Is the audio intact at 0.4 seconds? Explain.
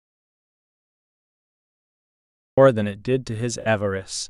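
No, at 0.4 s the clip is in an audio dropout to silence that's already under way when it starts and runs to about 2.58 s. It's dead silence with no room tone, likely because the input dropped out while the recorder kept writing silence, before the speech comes in.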